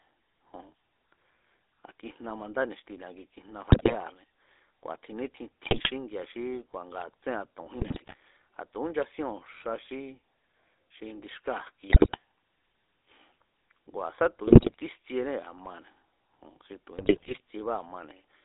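Throughout, the speech carries the GSM full-rate codec: a buzzy, gravelly texture from the pulse-driven vocal-tract model, within a telephone band of about 300 Hz to 3.6 kHz. This is consistent with the 13 kbps full-rate coder.

GSM bit errors then corrupt the decoder's filter, pitch and gain values, producing squawks, pops and gargling at 3.70–3.95 s after "ni̱xti ni̱a ki kijna", 5.62–5.91 s after "kua̱ tjin nítjin", 7.79–8.15 s, 11.90–12.18 s, 14.46–14.74 s, and 16.98–17.40 s after "xi tu̱".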